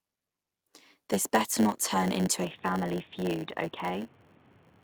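Speech with a block size mismatch (padded) throughout: a steady 100 Hz buzz from zero-filled gaps, and delivery at 0.919 times normal speed while timbre stays, unlike a sample-rate error. From 2.45 s, after "better not turn into", the sound abruptly dulls, with a new noise floor roughly 30 dB down, likely an input switched to a poorer device, not a filter.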